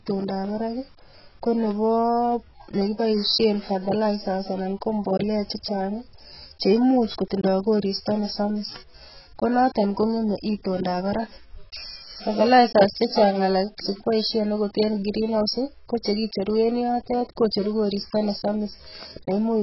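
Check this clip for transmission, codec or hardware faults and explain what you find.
One codec fault runs through the whole clip: AAC compression. From start to finish the speech sounds dull and smeared, with nothing above 5.6 kHz, and sibilants and held vowels take on a warbling, fizzy texture. The likely cause is heavy AAC-LC coding at a very low rate, one that fits roughly 12 kbps. Short of bits, the encoder drops the top band entirely and quantises what remains so coarsely that gaps and substitute noise replace real spectral detail.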